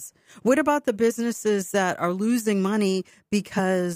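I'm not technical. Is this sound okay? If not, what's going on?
No. It has compressed frames skipped, at 1.09 s and again at 3.58 s. Each time, about one tiny chunk of the speech, roughly 20 ms, was never played. The sound jumps ahead slightly.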